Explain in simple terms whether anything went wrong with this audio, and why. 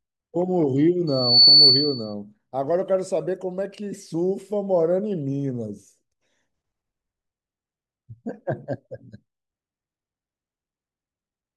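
Between 1.07 and 2.14 seconds there's a loudspeaker feedback squeal: the mic caught its own speaker, and a piercing 4.5 kHz tone swells up in about a third of a second, ending well above the speech level for about a second.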